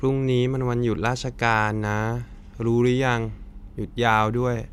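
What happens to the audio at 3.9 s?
Nothing goes wrong at 3.9 s; the speech carries on intact through that moment, with no dropout, click, distortion or other fault.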